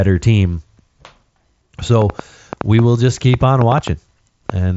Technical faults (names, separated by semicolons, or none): train of clicks